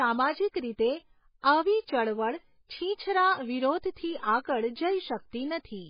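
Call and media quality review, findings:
Speech, entire clip: hard band limit at 5 kHz, heavy watery swirl, smeared consonant onsets. Likely MP3 compression at a very low bitrate, consistent with 16 kbps. Encoder cuts treble and drops weak spectral lines frame to frame.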